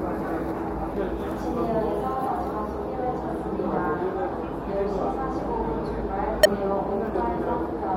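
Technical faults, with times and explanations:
3.76 s and 6.43–6.46 s, damaged data in a compressed stream: Bytes in the encoded file were corrupted, so the decoder could not read those frames correctly. It lost its place in the stream and had to search for the next valid frame header before it could resume decoding. The garbage it produced in the meantime comes out as a brief chirp or blip: a very short burst at 3.76 s and a longer one lasting about 25 ms at 6.43 s.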